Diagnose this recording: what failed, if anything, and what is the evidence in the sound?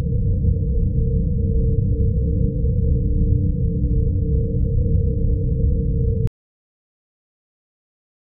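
At 6.27 s an audio dropout to silence cuts the sound off through the end: waveform goes flat, spectrogram goes black, no room tone, likely input link loss.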